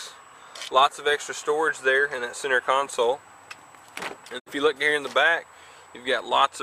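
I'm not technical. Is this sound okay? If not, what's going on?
No. Digital broadcast dropout, 4.38 to 4.48 s: the receiver briefly lost its signal, so the sound quickly fades out, then resumes, with that moment lost.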